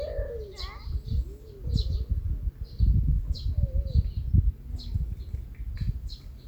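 No technical faults can be heard in this audio.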